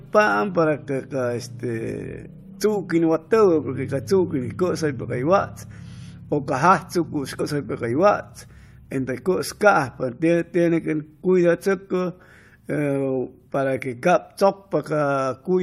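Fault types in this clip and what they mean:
Damaged data in a compressed stream: corrupted bytes in the coded speech make the decoder misread a frame and resync, giving a brief glitch at 7.39 s.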